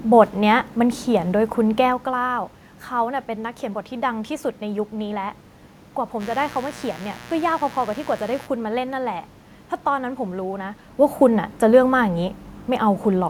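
From 6.18 s to 8.49 s a mains buzz cuts in under the speech: a steady, raspy 60 Hz buzz sitting roughly 15 dB below the talker. The rasp comes from sharp switching spikes, twice per mains cycle, probably from a dimmer, a rectifier or a missing shield, and those spikes spray harmonics of 60 Hz up into the kilohertz range. The room's own background noise and the talker's level shifts near 2 s and 11 s are separate from it.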